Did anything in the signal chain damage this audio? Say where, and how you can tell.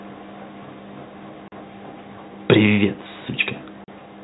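Yes. The damage is in the network stage: packet loss filled with silence. The speech drops out completely at 1.48 to 1.52 s and again at 3.84 to 3.88 s, each gap 40 ms long, which fits two consecutive 20 ms packets going missing. The receiver substituted silence instead of concealing the loss, so the cuts start and end abruptly. On the waveform they appear as flat-line notches with vertical edges. On the spectrogram they are blank vertical slots across the whole telephone band below 4 kHz.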